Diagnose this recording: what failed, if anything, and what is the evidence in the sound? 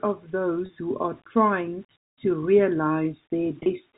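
At the sample-format conversion stage, the speech was most likely reduced to a very short word length by plain rounding, with no dither. The grain in the sound fits about 8 bits. The rounding error tracks the signal, so a grainy, level-dependent distortion sits roughly 35 dB below the speech throughout. It roughens quiet passages and decaying syllable tails more than the louder ones. This low bit depth without dither is separate from the telephone coding, which sounds like ordinary G.711 band-limiting.

On the network side, there are two brief gaps of packet loss with pitch repetition: one at 0.66 s and one at 3.63 s, each lasting 30 ms, which fits a single lost packet. The receiver's concealment filled each hole by repeating the last pitch cycle before the loss. Because the gaps are short, each is heard as a momentary held, slightly buzzy sustain, after which the speech picks up again with no audible dropout.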